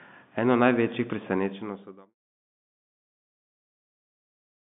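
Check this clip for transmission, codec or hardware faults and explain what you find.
No transmission, codec or hardware faults turn up in this speech clip. It has the narrow band of G.711 telephone coding, with nothing above about 3.7 kHz, and a smooth fade out that begins around 1 s and ends by 2.15 s.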